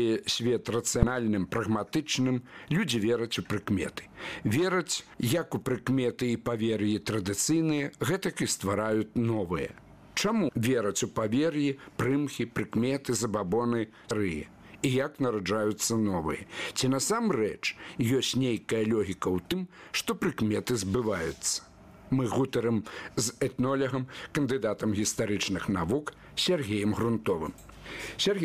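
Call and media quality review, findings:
Damaged data in a compressed stream: short blips at 1.02 s, 10.47–10.50 s, 14.10 s and 19.51 s, each roughly 15–20 ms. Probable component: decoder input. Corrupted bytes make frames misdecode until the decoder resyncs on the next header. Distinguishing factor: a misdecoded-frame artifact with resync rather than the smeared repeat of packet-loss concealment or a buffer dropout.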